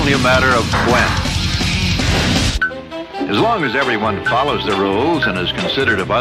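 At 1.28 s, damaged data in a compressed stream: corrupted frames make the decoder misread them and lose sync, producing a brief glitch.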